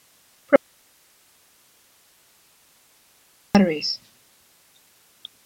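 At 0.56 s the path likely lost its source while the stages after the break stayed live: an audio dropout to a faint residue. The speech cuts out abruptly, leaving only hiss roughly 45 dB down, and returns just as suddenly at 3.55 s.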